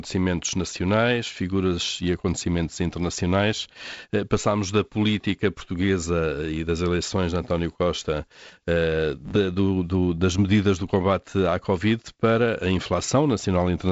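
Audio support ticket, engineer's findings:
Engineer's findings: no fault found; the G.722 wideband path at 48 kbit/s sounds as expected, with nothing above about 7.7 kHz.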